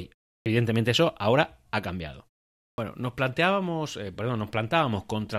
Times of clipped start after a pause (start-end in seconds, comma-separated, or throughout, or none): 0.41-0.46, 2.73-2.78